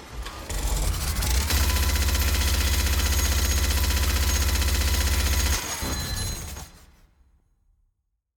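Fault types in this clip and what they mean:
No audible faults detected.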